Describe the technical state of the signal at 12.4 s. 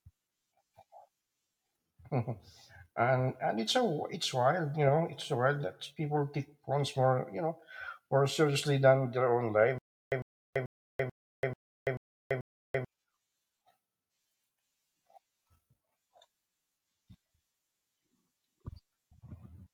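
At 12.4 s the playback has likely stalled and keeps retrying, replaying its last 103 ms fragment and then running dry. That gives a stutter with silent gaps from 9.78 to 12.85 s: the same short burst returns seven times, every 438 ms, separated by 334 ms of dead digital silence.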